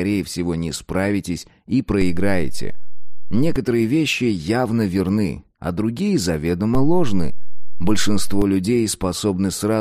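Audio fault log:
2.02 to 3.56 s and 6.75 to 8.42 s, DC step: the waveform's zero line jumps by about −15 dBFS, then about −13 dBFS, holds, and drops back at each end time, so you get a low thump at every jump while the sound carries on untouched.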